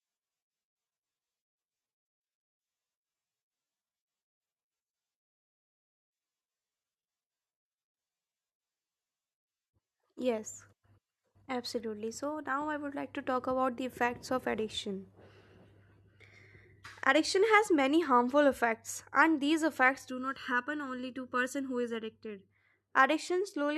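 From 20.10 to 22.50 s, just after "effects and these effects", one channel runs late by under a millisecond before the two are summed to mono, causing channel delay (comb filtering): evenly spaced cancellations starting around 700 Hz leave the speech sounding hollow and phasey.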